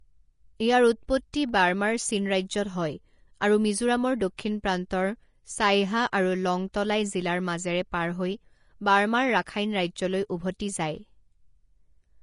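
Throughout this speech clip the audio sounds hissy and grainy, with nothing above 10.6 kHz and roughened, smeared detail in the upper range. This is likely Vorbis compression at a low setting, consistent with roughly 33 kbps, where the treble is quantised so coarsely that fine detail turns into noise. Pre-echo appears as a brief hiss just ahead of sharp onsets at 1.33 s and at 4.37 s, right after "আৰু মিজোৰামৰ". Each spreads about 11 and 15 ms respectively. The codec's quantisation noise, sized for the loud attack, leaks across its transform block into the quiet instant before it, softening the attack.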